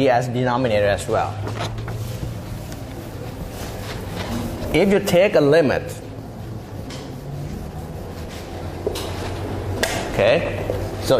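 No technical faults can be heard anywhere in this audio. There is nothing to place in time or describe.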